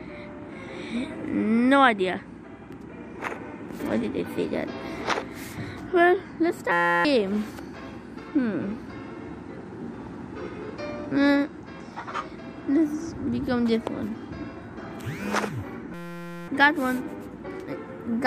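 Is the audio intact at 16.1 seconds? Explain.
No. A system hang loop runs from 15.94 to 16.48 s: a frozen system replays one 5.8 ms buffer, likely 256 samples, producing a steady 172 Hz buzz.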